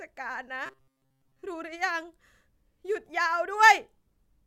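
From 0.66 to 1.44 s, new audio likely reached the playback software too seldom, so it kept repeating its last short buffer to fill the gaps, about 7.5 ms at a time, while most of the real speech in that stretch was skipped. This is robotic sound from repeated short buffers: the constant looping imposes a fixed pitch of 133 Hz, turning the speech into a rigid, metallic buzz that only loosely tracks the original speech.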